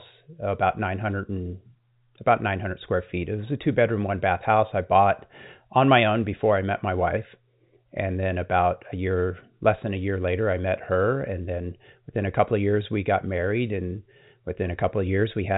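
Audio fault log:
No fault is logged for this speech clip, which has the sound of G.711 telephone coding, with nothing above 3.8 kHz.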